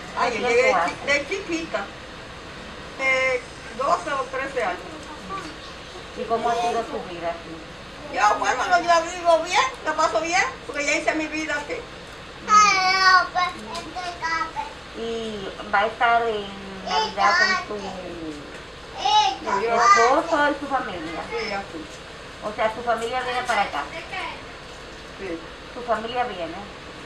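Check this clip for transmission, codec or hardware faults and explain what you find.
Two transmission faults turn up, back to back.

At about 2.99 s there's a skip ahead: roughly a second of audio was dropped when later packets were already queued, so playback jumps forward with no gap.

From 3.19 to 4.99 s you get a jitter buffer speed-up. The buffer was overfull, so tiny pitch-period slices, about 150 ms in total, got trimmed. That makes things run about 7% fast at unchanged pitch, sounding slightly rushed.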